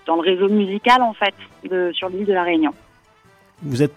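Timecode bleed runs through the whole clip: a faint, steady chirping warble sits behind the sound from start to finish. Linear timecode from an adjacent track or cable has leaked into the audio path. Its square-wave code flips between tones near 1 kHz and 2 kHz, and the rhythm of the chirp fits a 23.976 fps timecode. The leak is low, roughly 45 dB below the wanted signal, so it reads as a thin, constant whistle.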